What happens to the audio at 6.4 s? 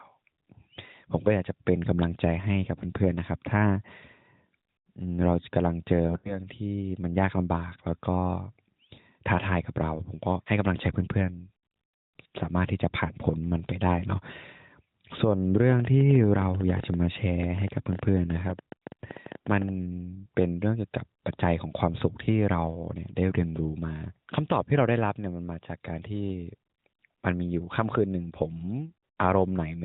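Lost AMR speech frames, 6.08 to 6.47 s: the decoder repeats the last good parameters at falling gain, giving a brief warbling dip, seen as smeared, fading spectrogram bands.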